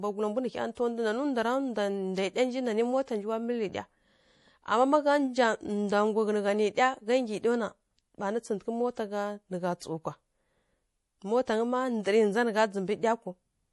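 From the start, the speech carries MP3 compression damage, likely from a low bitrate around 48 kbps: nothing above 11.5 kHz, and a watery, swirling texture, unlike plain low-pass filtering's clean dullness. At 0.75 to 0.77 s comes pre-echo: a 21 ms hiss smeared ahead of a sharp attack, where the codec spread its block noise backwards. It differs from a click by arriving before the onset rather than on it.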